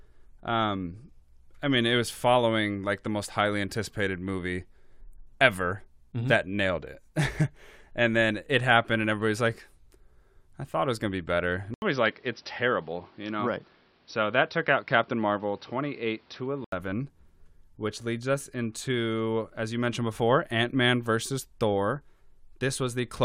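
Input switched to a poorer device, from 11.74 s to 16.72 s: after a silence of 80 ms, the speech loses everything above 5.8 kHz and turns dull and boxy. A faint new background noise, well below the speech, comes in with it, while the loudness stays about the same. The likely cause is the recording moving to a different microphone or a headset's narrower call profile, then returning to the original input at 16.72 s, where the full brightness comes back.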